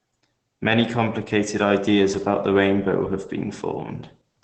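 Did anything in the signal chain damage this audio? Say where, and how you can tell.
Yes, at the codec stage: this is Opus voice compression, audible for the whole of the speech. The top end stops at about 8.9 kHz, close to the 8 kHz wideband ceiling of the SILK linear-prediction coder, and the voice comes across muffled, a bit hoarse and faintly robotic because the excitation is coded coarsely. That damage level fits a low rate of around 12 kbps, likely with 20 ms frames.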